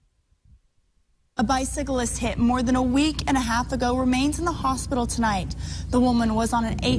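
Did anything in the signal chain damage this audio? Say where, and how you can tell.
No, nothing in the signal chain has left an audible mark on this audio; every stage from capture to playback passes the signal through without any detectable damage.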